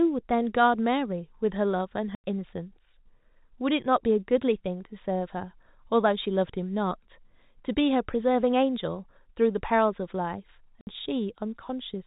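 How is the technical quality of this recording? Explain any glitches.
The speech carries two audible dropouts, heard against the narrow telephone-band sound of G.711 coding, which cuts everything above 4 kHz. Both gaps come from packet loss filled with silence.

At 2.15 s the sound stops dead for 90 ms, resuming at 2.24 s, and at 10.81 s a 60 ms hole runs to 10.87 s. Each has abrupt edges. Consecutive packets never arrived, so the receiver inserted pure silence. Both gap lengths fit 10 ms packets.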